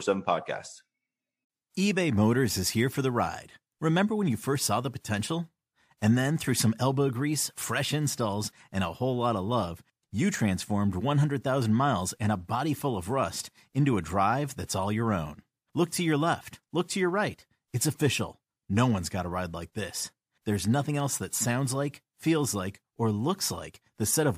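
Speech recording with no technical faults audible anywhere in the clip.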